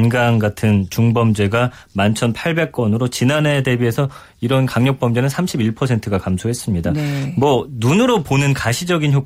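No technical faults can be heard anywhere in this speech recording. There is nothing here that calls for a timestamp or a description of a problem.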